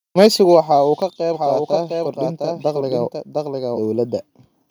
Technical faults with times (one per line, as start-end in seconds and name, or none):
0.19-0.27 microphone overload
1.34-3.80 doubled audio track